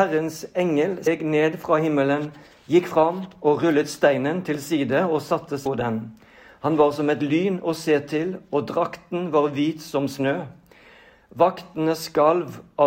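Compressed frames skipped at 1.06 s and 5.65 s: the audio jumps ahead roughly 300 ms each time, consistent with about fifteen dropped frames.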